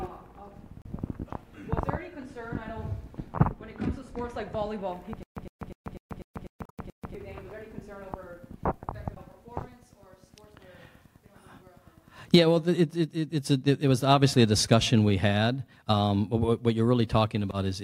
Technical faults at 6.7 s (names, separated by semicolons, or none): stutter with silent gaps; damaged data in a compressed stream